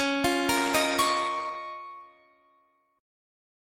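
From 0.58 s to 1.65 s the sound turns coarse and watery, with the top end dulled, then clears again. This is a call bitrate drop. The connection's bandwidth estimate fell, so the encoder had far fewer bits to spend and coded the signal more roughly, trimming high frequencies as well. The degradation sits at its worst for about a second, consistent with a fall from roughly 64 kbps to around 21 kbps before recovering.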